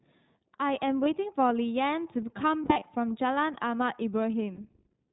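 iLBC codec, throughout: nothing above 4 kHz comes through, and the speech sounds plainly rough and synthetic. The sound fits the 15.2 kbps mode with 20 ms frames.

Lost iLBC frames, at 1.04 to 1.07 s, 2.62 to 2.85 s and 4.56 to 4.60 s: packets dropped out, and the decoder filled each gap by repeating the last pitch cycle mixed with noise. The result is a brief, held, buzzy vowel. The first and last gaps fit a single missing 20 ms frame. The middle one is several losses scattered over 0.2 s, the longest run around 40 ms. Clean speech returns almost immediately after each.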